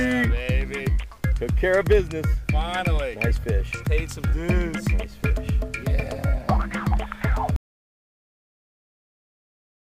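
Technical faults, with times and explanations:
7.56 s to end: audio dropout to silence. The sound cuts off abruptly at 7.56 s and the remaining 2.4 s is pure silence with no room tone, most likely because the input was lost, through a disconnected device, failed link or mute, while recording continued writing silence.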